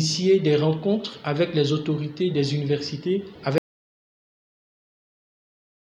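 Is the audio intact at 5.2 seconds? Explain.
No. The input signal was likely lost while the recorder kept writing zeros. This audio dropout to silence runs from 3.58 s to the end, so the sound cuts off abruptly and 5.2 s falls in complete silence, with no room tone left.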